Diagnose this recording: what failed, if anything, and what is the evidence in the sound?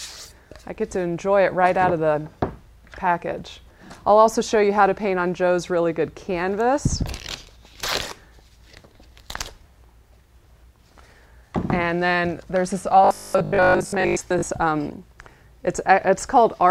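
From 13.05 to 14.49 s the sound collapses into a rigid, metallic buzz at a fixed 50 Hz that follows the original only roughly. This is robotic sound from repeated short buffers, most likely at the driver or buffer stage. When fresh audio arrives too seldom, the last 20 ms of audio is replayed to fill the gap, and the real material is skipped. Roughly two thirds or more of this stretch is repetition, and the 50 Hz rate matches a 20 ms buffer.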